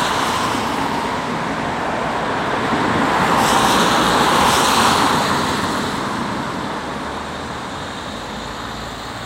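No technical faults can be heard anywhere in these sounds.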